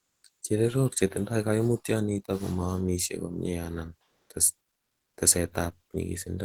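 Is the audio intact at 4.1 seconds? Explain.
No, from 4.03 to 4.27 s the real background drops out and is replaced by comfort noise, a steady, featureless hiss that shifts level by about 5 dB. The likely cause is discontinuous transmission such as Opus DTX, where the receiver synthesizes that filler during the pause.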